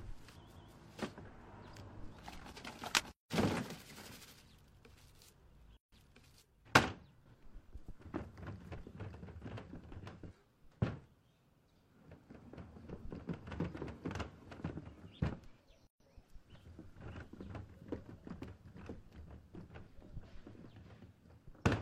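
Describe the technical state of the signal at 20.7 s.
At 20.7 s the audio is intact, with no technical fault audible at that moment.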